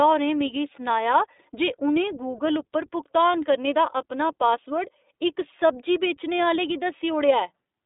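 A speech clip, passed through the iLBC codec from start to end. Nothing above 3.8 kHz survives, and the band runs from 300 Hz to 3.7 kHz. Each 20 ms frame is coded independently, so the voice has a plainly rough, synthetic edge. The sound fits a 15.2 kbps rate.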